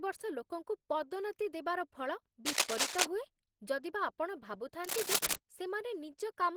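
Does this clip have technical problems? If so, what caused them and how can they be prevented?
Yes. Throughout the speech there is a muffled, hoarse, grainy quality, with roughness in place of the hollow swirling that MP3 leaves. That points to Opus compression, likely at a low bitrate around 16 kbps, where the encoder works in its hybrid speech mode and patches thin bands with noise. The band still reaches about 20.4 kHz, so this is coarse coding rather than a narrowed bandwidth. Encoding speech at a higher Opus bitrate prevents this.

From 2.46 to 3.05 s and again from 4.84 to 5.35 s, cable scratch noise rasps over the speech a little louder than the voice itself. These are dense, uneven bursts of rustling lasting about half a second each, not the isolated ticks of clicks or crackle, which suggests contact resistance fluctuating as a worn cable or connector shifted. Replacing worn leads and securing cables so they cannot move during recording prevents this.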